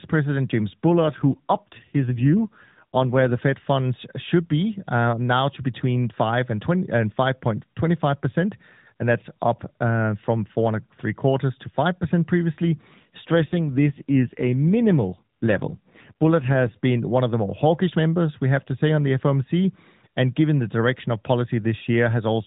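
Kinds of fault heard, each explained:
AMR rate drop: the mobile link pushes the AMR codec into a leaner mode and spends the freed bits on error protection. With no gap or band change, the speech turns buzzier and more synthetic from 0.87 to 3.41 s and 13.30 to 16.78 s, which fits 12.2 kbps dropping to 5.9 kbps.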